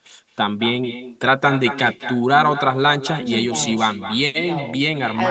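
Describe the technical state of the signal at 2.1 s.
Echo with no canceller is present at 2.1 s, as it is throughout the clip. The far end is playing the call through a loudspeaker, its microphone catches that playback, and nothing subtracts it, so the speech returns after the network round trip, roughly a fifth of a second late. The returning copy sits about 12 dB below the direct speech, thinner, trailing each syllable, all within the call path's 8 kHz ceiling.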